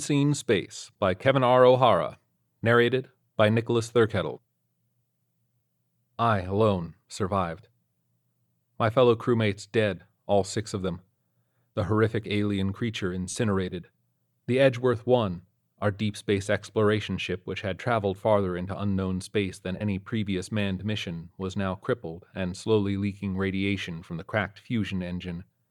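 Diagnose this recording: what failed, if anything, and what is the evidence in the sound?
Lost LE Audio frames at 13.30 and 19.78 s, on the Bluetooth link: LC3 concealment refilled 45 and 22.5 ms with sign-scrambled repeated spectrum, a brief noisy smear.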